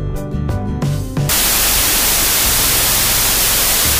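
From 1.29 s to the end, a wrong sample width fault hits. Data written as 32-bit integers are read as 16-bit. Loud noise buries the sound, now half speed and an octave low.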